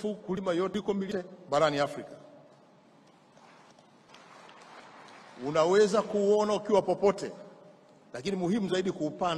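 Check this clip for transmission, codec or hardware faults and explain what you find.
Two short stretches of chunks out of order, at 0.37 to 1.12 s and 3.34 to 4.09 s. In each, one 0.37 s block plays a chunk late, giving a jumbled moment with three hard joins. Unlike a dropout or a repeat, no audio is missing or doubled.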